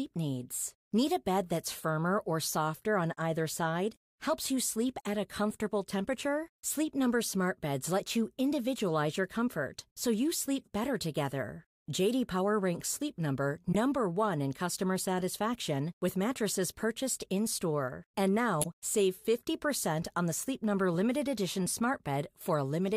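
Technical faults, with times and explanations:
10.60 to 10.69 s, corrupt frame decoded: between "your comfort so you" and "better together", a faint blip as damaged compressed data puts energy at the wrong frequencies across a handful of frames.
13.67 to 13.75 s, corrupt frame decoded: a fairly loud chirp. Misread gains and codes spray energy across the spectrum for several consecutive damaged frames.
18.60 to 18.66 s, corrupt frame decoded: a short, loud burst of noise. It is brief enough to suggest only a couple of frames were played with flipped bits.
20.94 s, corrupt frame decoded: a quick, moderate squeak where the decoder played a few damaged frames anyway and briefly put energy at the wrong frequencies.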